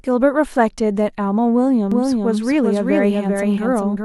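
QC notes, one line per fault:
1.92 s to end: doubled audio track. A second full-band copy of the speech enters abruptly, trailing by roughly 400 ms at about 5 dB below the original, with no decay or room colour, likely from the signal being captured again by a slower path.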